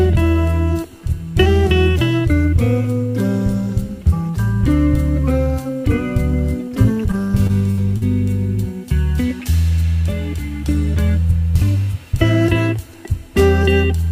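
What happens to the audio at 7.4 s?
Repeated packet loss (robotic sound) runs from 7.11 to 8.03 s, covering 7.4 s. Over that stretch the stream keeps losing data, which sounds like four separate holes, the longest about 61 ms. Each hole is filled by extending the sound just before it, and the next one arrives soon after, so about 15% of the span is patched. The result is choppy audio with small pieces missing.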